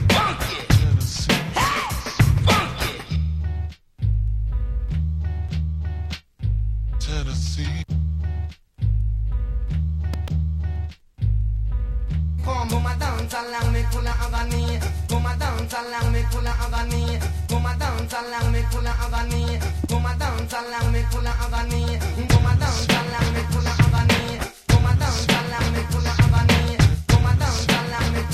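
At 10.14 to 10.30 s comes a double loud pop, then a single one at 19.84 s. Each is about 10 dB above the surrounding sound. They are likely voltage spikes from a plug, switch or static. On a waveform they appear as tall narrow spikes, and on a spectrogram as thin vertical broadband lines.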